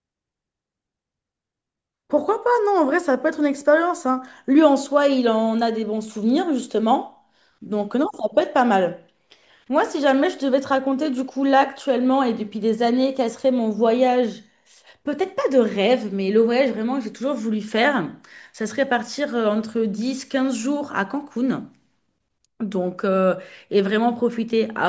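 No technical faults are audible.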